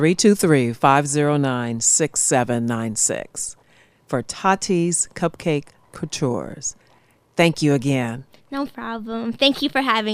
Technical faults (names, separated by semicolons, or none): none